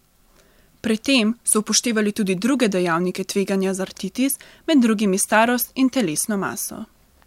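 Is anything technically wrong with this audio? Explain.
No, nothing is technically wrong with this audio.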